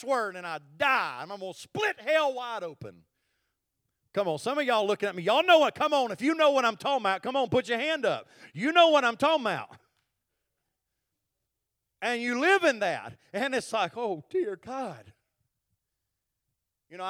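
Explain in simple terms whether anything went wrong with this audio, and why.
Sample clock jitter from 0 to 6.24 s: the recording clock wavered by a couple of microseconds, mistiming samples and adding a faint hiss to the louder, brighter parts of the speech.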